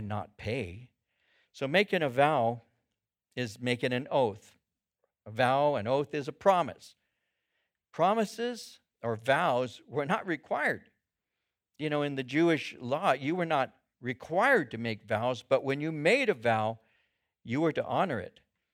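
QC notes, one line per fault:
No faults heard anywhere in this recording.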